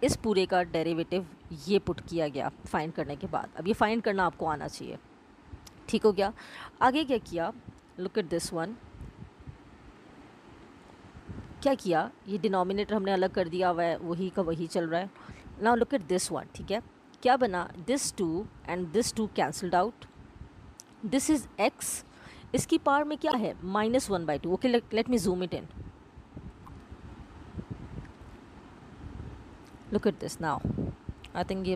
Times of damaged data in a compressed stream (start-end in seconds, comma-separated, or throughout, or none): 23.29-23.34, 26.66-26.69